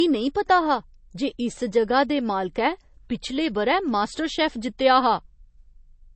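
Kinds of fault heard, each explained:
Low-bitrate audio saved at a high bitrate: The speech sounds dull and muffled throughout, with nothing above about 8.3 kHz and the artefacts of the first compression, despite the file's generous size. This likely comes from a low-bitrate MP3, consistent with something around 32 kbit/s, being re-encoded as a high-bitrate MP3. The second encoding keeps the damage intact, so the missing treble and artefacts of the first pass remain.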